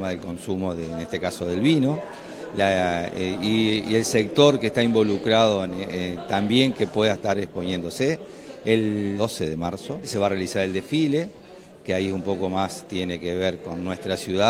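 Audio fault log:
Nothing stood out on listening; the sound holds steady all the way to the end.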